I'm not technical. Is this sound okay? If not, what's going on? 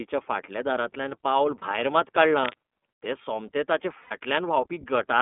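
No. The speech sounds thin and muffled, like an old phone line, with a slightly rough, synthetic edge throughout. This is the iLBC codec, a phone-call compression system that keeps only a narrow band of sound, roughly 200 Hz to 3.5 kHz, and rebuilds the voice approximately.

At 1.59 s there is a very brief held, buzzy patch, and at 4.02 to 4.12 s a longer one that fades slightly. These are lost iLBC frames: pieces of the call went missing, and the receiver filled each gap by repeating the last bit of voice with some hiss.

From 2.40 to 2.56 s a rough scratching, rustling noise sits fairly loudly over the speech. This is cable scratch noise, most likely from a worn cable or plug being moved, which makes the connection flicker.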